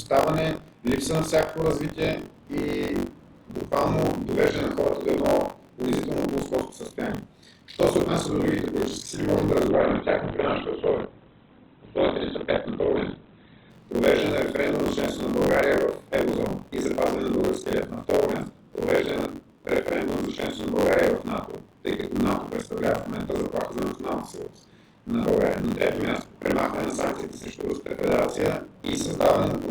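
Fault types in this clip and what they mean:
Buffer tearing: A steady robotic buzz near 46.9 Hz rides on the sound for the whole clip and drops out wherever the signal goes quiet. The buzz rate fits a 1024-sample buffer. The code filling the ring buffer and the hardware draining it have drifted out of step, so they cross in every period. Around two-fifths of each buffer replays audio from roughly 40 ms earlier, with a hard splice at each edge.
Adaptive stream at a lower bitrate: From 9.70 s to 13.70 s the top end abruptly disappears, with nothing above 4.4 kHz, and the sound turns thinner and more smeared with coding artefacts. There is no gap at either edge, just a sudden change in quality and then a sudden return. The player briefly switched to a much leaner version of the stream, consistent with a move from about 64 kbit/s Opus to about 12 kbit/s Opus while the connection slowed.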